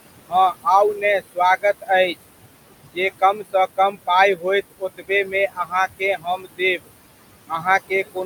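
Across the whole clip the background pumps down between phrases and swells back under them. These are noise suppressor artifacts: a suppressor cuts about 20 dB from whatever it judges to be steady noise, applied to the room noise sitting about 12 dB below the speech. From 0.28 to 2.16 s, then 2.94 to 6.89 s, and from 7.48 s to the end, soft consonants and word endings sound swallowed, in all a little under half a second in the first stretch and about a second in the second. This is speech cut by the noise suppressor, which mistook those quiet parts for noise and pulled them down by as much as about 21 dB, 20 dB and 19 dB respectively.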